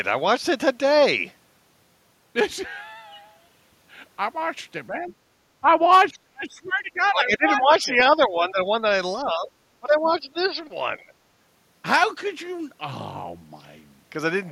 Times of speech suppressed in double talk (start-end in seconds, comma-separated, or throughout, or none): 4.89-5.13, 5.61-5.67, 6.10-8.59, 9.24-9.49, 9.80-10.61